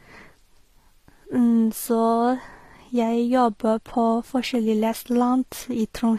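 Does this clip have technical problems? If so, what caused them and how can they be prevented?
Yes. Throughout the speech there's a layered texture of combined codec artefacts with nothing above 14.9 kHz, likely transcoding between lossy codecs: it sounds like a low-bitrate HE-AAC pass later re-encoded as MP3, with the second stage spending bits on the first stage's artefacts. To prevent it, encode once from the original source rather than converting one lossy file into another.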